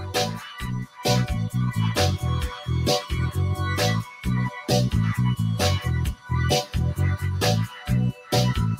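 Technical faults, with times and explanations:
Throughout: noise suppressor applied to music or sounds. A speech-tuned suppressor stays active and treats steady tones and tails as noise, so the level swings by around 10 dB and pumps.
0.00–1.06 s, 2.48–2.68 s, 4.02–4.26 s, 4.50–4.69 s, 6.14–6.31 s, 7.67–7.89 s, 8.12–8.32 s: sound cut by the noise suppressor. The suppressor misjudges held or fading sound as noise and drops it by about 10 to 15 dB, so those stretches sink and thin out.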